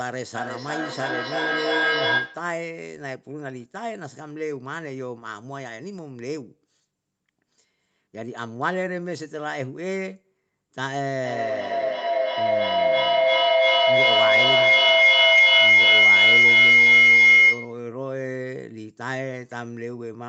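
In this speech clip, feedback howl rises twice: from 0.35 to 2.61 s, building to about 7 dB above the speech around 1.5 kHz, and from 11.24 to 17.94 s, reaching about 15 dB above it near 2 kHz. Both pulse roughly every 0.3 s, the round-trip time of a loop between two devices sharing a room on one call. Unlike plain echo, whose repeats fade, these repeats swell and narrow to a single ringing tone until the loop is broken.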